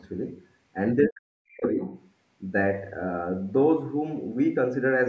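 Other side's voice leaking through at 1.02 to 1.08 s: a brief scrap of a second voice, nearly as loud as the speech, likely loudspeaker echo the canceller missed. Speech suppressed in double talk follows from 1.08 to 1.79 s. The talker's speech drops sharply, by around 40 dB at its deepest, for roughly 0.7 s, likely because the echo canceller could not separate the talker from the echo and turned both down. The leak returns faintly at 1.85 to 1.95 s, far quieter this time.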